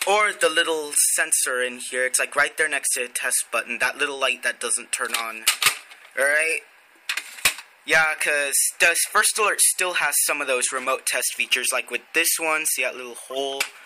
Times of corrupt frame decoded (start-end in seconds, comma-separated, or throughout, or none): 13.30-13.38